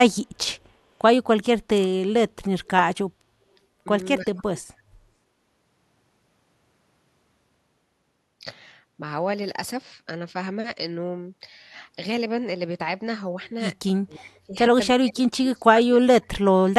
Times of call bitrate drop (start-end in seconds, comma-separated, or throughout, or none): none